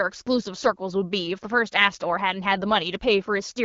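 No technical faults are audible.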